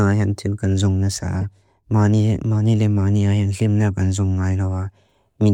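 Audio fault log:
1.41–1.43 s and 3.54 s, corrupt frame decoded: damaged compressed frames, a few each time, were decoded anyway, so misread gains and codes threw energy into the wrong frequencies. The result is brief glitches after "tin kan zung na" peaking around -15 dBFS, and before "limna kan zung nga" around -20 dBFS.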